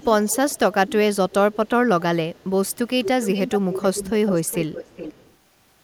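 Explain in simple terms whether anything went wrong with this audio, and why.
Echo leak at 0–0.59, 0.87–0.93, 1.3–1.34, 1.52–1.69 and 2.35–2.44 s, then loudest from 2.67 to 5.33 s: faint, delayed copies of the speech trail about 0.4 seconds behind. This is likely a speakerphone whose echo canceller failed to remove its own playback.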